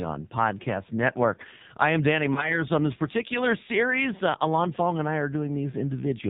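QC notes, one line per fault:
throughout: AMR narrowband mobile codec. Buzzy, synthetic speech with nothing above 4 kHz, which points to heavy AMR-NB compression at a low rate, around 5.9 kbps.
2.34–2.58 s: lost AMR speech frames. A brief dip and warble, then rough recovery. This fits a single dropped 20 ms frame concealed by repeating the previous pitch at fading gain.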